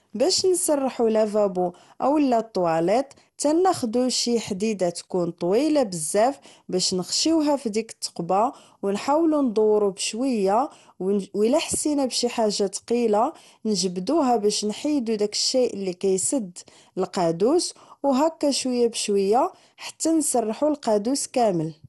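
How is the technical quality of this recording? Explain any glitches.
The technical quality is poor throughout the speech, with one fault running the whole length: generation loss. The sound is swirly, hollow and smeared, consonant attacks are blurred, and nothing remains above about 11.9 kHz. This is likely the result of around seven rounds of lossy decoding and re-encoding, with the character pointing to MP2 at roughly 96 kbit/s. Each pass requantises on a shifted frame grid, so noise accumulates. On a spectrogram this shows as a hard ceiling at 11.9 kHz and smeared onsets.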